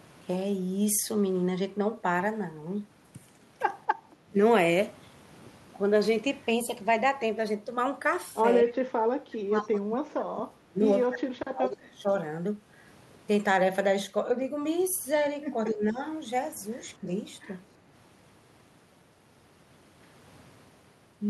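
At 4.14 to 4.32 s, the echo canceller clamped the microphone while the loudspeaker was active, producing background gated by the echo canceller: the room sound dips by about 7 dB for roughly a fifth of a second, then returns once the canceller releases.

From 8.63 s onward, the canceller could not tell the near talker from loudspeaker echo during overlap and pulled both down, most likely speech suppressed in double talk. It appears at 8.63 to 8.74 s, 9.06 to 10.81 s, 11.07 to 12.1 s, 15.7 to 16.0 s, and 17.01 to 17.09 s. The voice sinks by around 15 dB in the first, roughly 30 dB in the second and third, about 15 dB in the fourth, and around 10 dB in the last.

Within that second stretch, at 9.56 to 9.68 s, some loudspeaker pickup escaped cancellation and was sent back, probably an echo leak. It is a faint copy of the voice arriving 242 ms late, roughly 35 dB below the speech.

The call itself runs through Opus, whose sound fits a bitrate around 64 kbps, with the top end rolling off near 12 kHz.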